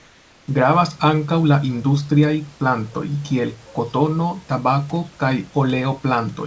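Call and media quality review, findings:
Comfort noise in place of the background, 0.00–0.48 s: steady, featureless hiss about 3 dB quieter than the room tone that follows, likely from discontinuous transmission filling the gap. Spectrogram: smooth, textureless band. Waveform: flat envelope, stepping up at 0.48 s.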